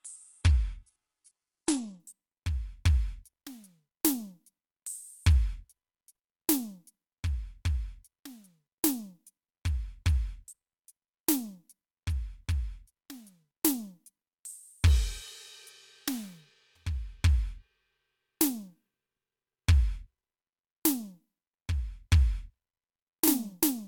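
From 0.0 to 2.0 s the music plays as an adaptive stream starting at a low bitrate. It sounds dull and smeared, which points to a very low HE-AAC rate. A spectrogram shows nothing above 11.1 kHz until 2.0 s, when the treble appears abruptly, with no gap.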